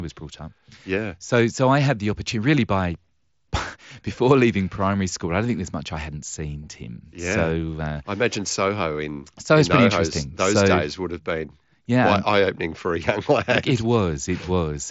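No technical faults occur anywhere in this speech, which carries content up to 7.7 kHz over a Bluetooth mSBC headset link.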